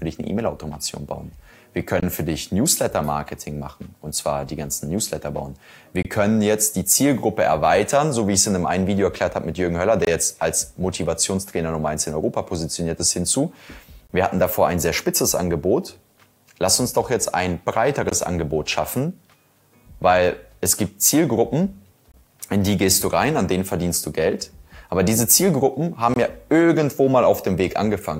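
Short dropouts break the sound at 2.00, 6.03, 10.05, 14.07, 18.09, 22.12 and 26.14 seconds. They arrive every 4.0 seconds. Each is a gap at a join of encoded pieces. The first lasts 24 ms, the rest about 23 ms. The audio was encoded in separate segments and joined untrimmed. Encoder start delay and final-frame padding stayed in. Each join opens a brief, abrupt silence with smeared edges. The sound then resumes where it left off.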